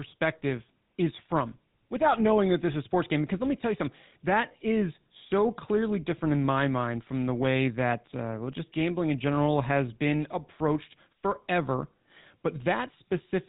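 From start to finish the speech carries GSM full-rate codec damage: nothing survives above 4 kHz, and the coarse pulse excitation gives a buzzy, gravelly roughness, which fits a 13 kbps bitrate.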